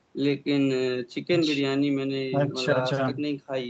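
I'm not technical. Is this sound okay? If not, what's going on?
Yes, no faults: this is ordinary speech through a call microphone's normal processing, which trims the deepest bass and anything above 8 kHz by design.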